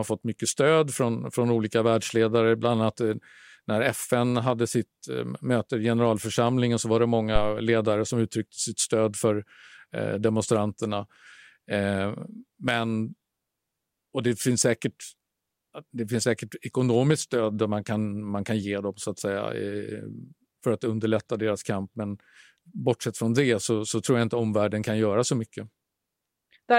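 A speech recording with a phantom power thump at 7.36 s: a deep low thud running to 7.57 s, peaking around -11 dBFS and dying away in about 48 ms. That's the supply being switched on a live input, its voltage step punching through the coupling capacitors.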